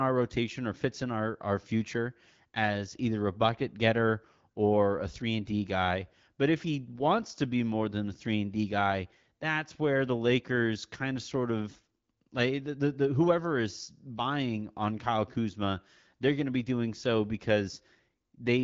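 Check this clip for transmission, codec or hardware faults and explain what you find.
Nothing here points to a transmission, codec or hardware fault; the speech comes across as an ordinary wideband phone call at 12.65 kbit/s, with nothing above about 7.5 kHz.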